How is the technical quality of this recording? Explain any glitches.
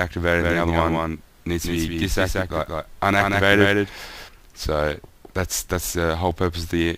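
The recording has one clear glitch, a doubled audio track. From 0.40 s to 4.28 s every sound is followed by a dry, full-band repeat about 200 ms later and roughly 5 dB quieter, giving a flat slapback that starts and stops abruptly. This likely comes from the audio being mixed in twice, once through a slower path.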